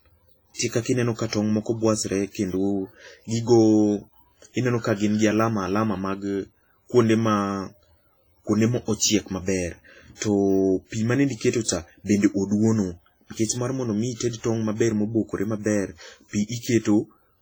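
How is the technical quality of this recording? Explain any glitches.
The technical quality is poor: heavy lossy coding runs through the whole speech clip, and a few attacks are smeared.

WMA compression, throughout: The encoder likely ran at a low bitrate, with a heavily starved sound that fits about 24 kbps. Too few bits were available, so quieter spectral lines were discarded and the remaining quantisation noise was spread across long transform blocks. The speech sounds washy and ringing, with a hiss that swells and fades along with the voice.

Pre-echo, at 0.54–0.59 s, 1.28–1.33 s, 11.64–11.68 s and 14.15–14.20 s: A sharp onset landed late in a transform block. The noise the codec sized for that loud attack was spread evenly across the whole block, including the quiet stretch just before it. Each attack is preceded by a brief hiss lasting about 43 to 54 ms. The hiss blurs the onset, so those attacks sound softened and smeared.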